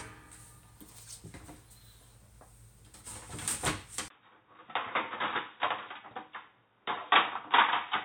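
At 4.08 s there is a gap of about 20 ms. Then the sound turns dull and boxy until the end. Nothing passes above 3.8 kHz. The level drops about 5 dB, and a faint new background noise sits far below. The likely cause is an input switched to a poorer device.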